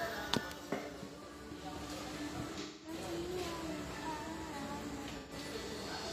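At 2.61 to 2.94 s and again at 5.17 to 5.33 s, AAC frame loss with concealment replaces the missing audio with a guess from the last good spectrum, giving a smeared, noisy patch. On a spectrogram it shows as a blurred band of frozen, flattened texture; the waveform loses its detail there.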